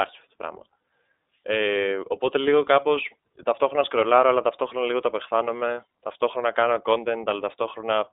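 A speech clip coded with the iLBC codec throughout. Nothing passes above about 3.8 kHz, and the band sits near 300 Hz to 3.7 kHz. Each frame is coded alone, so the speech sounds plainly rough and synthetic, which fits 30 ms frames at 13.33 kbps.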